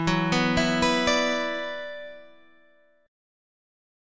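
Nothing is technically wrong with this audio.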